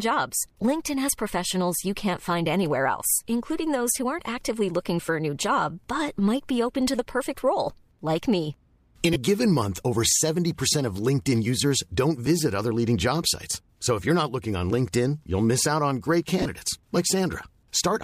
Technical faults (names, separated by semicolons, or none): lost LE Audio frames